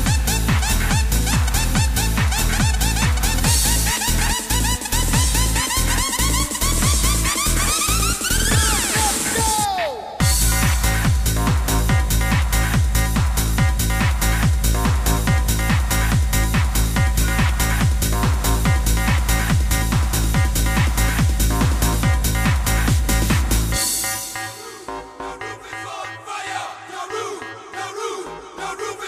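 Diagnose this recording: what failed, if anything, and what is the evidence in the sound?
Nothing in the recording points to a failure at any stage, so there's no fault to diagnose here.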